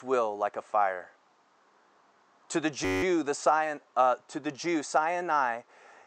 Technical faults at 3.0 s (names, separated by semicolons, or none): system hang loop